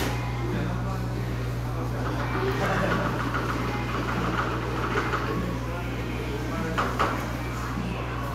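A recording of sounds with mains hum running through the whole thing: a steady 60 Hz tone sitting roughly as loud as the sound itself. It's almost certainly a ground loop or a nearby transformer leaking the power line into the signal.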